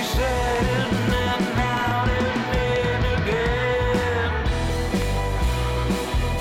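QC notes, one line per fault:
0.56–0.58 s, 1.77–1.93 s, 2.76–2.78 s, 5.02–5.04 s: loud pop, single sharp pops except a quick double at 1.77–1.93 s, each peaking around 10 dB above the signal with the sound continuing underneath. Likely a voltage step from a plug, switch, static or driver glitch.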